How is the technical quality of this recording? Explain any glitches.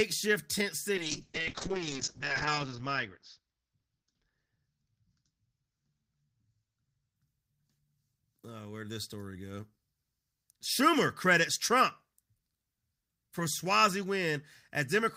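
The recording has one clear problem: a call bitrate drop from 0.97 s to 7.22 s. The call's bandwidth estimate fell, so the encoder went from 40 kbps down to 6 kbps, holding the lowest rate for 1.01 s. At that rate it coded the speech much more coarsely and narrowed the audio band from 20 kHz to 8 kHz, so the speech turns muffled and watery. Unlike packet loss, the sound never breaks up or repeats. It degrades continuously and then recovers.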